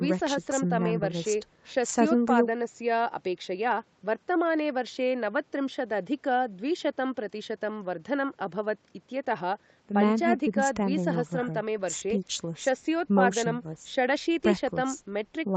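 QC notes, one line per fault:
No faults heard in this speech.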